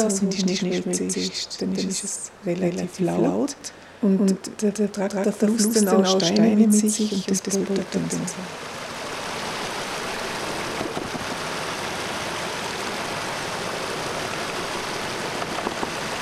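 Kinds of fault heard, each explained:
Doubled audio track: a full-band copy trails by roughly 150 ms at about equal level throughout, with no decay or room colour, likely a second capture path mixed in.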